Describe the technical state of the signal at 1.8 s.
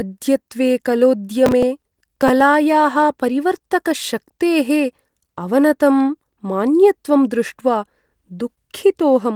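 At 1.8 s the sound sits inside a burst of processor overload crackle running from 1.46 to 2.41 s. Repeatedly missed deadlines, fitting buffers of around 5 ms, replay stale fragments with hard edges, heard as gritty tearing. The waveform shows abrupt step discontinuities, and a spectrogram shows scattered thin vertical broadband streaks.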